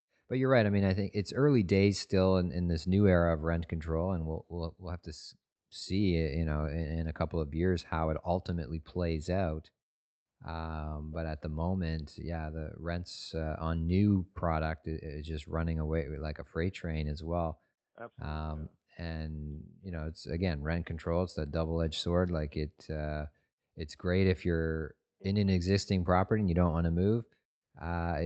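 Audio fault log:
No faults are heard in this speech recording. It came through a WebRTC call path working as intended, with the high frequencies stopping at 8 kHz, which fits the Opus codec at a modest bitrate near 32 kbps.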